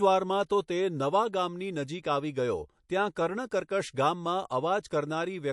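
MP3 compression damage runs through the whole of this speech clip and is plainly audible: the sound is watery and swirly, with metallic chirping on s sounds. The likely cause is a low-bitrate MP3 encode, around 48 kbps. With so few bits, the encoder zeroes weaker frequency lines, which flicker on and off from frame to frame, and attacks smear.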